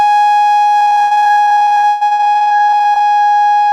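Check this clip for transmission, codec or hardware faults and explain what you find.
There is one transmission fault in this music. From 0.79 to 3.02 s the sound turns choppy, with pieces missing. This is repeated packet loss (robotic sound). Dozens of gaps, the longest 118 ms, are each patched by stretching the preceding sound, so nearly half this stretch is filled-in audio.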